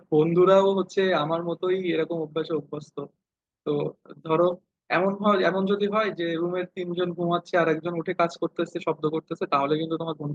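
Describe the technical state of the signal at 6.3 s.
At 6.29–6.31 s, a lost packet rebuilt from error correction: the next packet's low-bitrate copy fills 20 ms, so there's no gap, just a briefly rougher, noisier texture rather than smeared concealment.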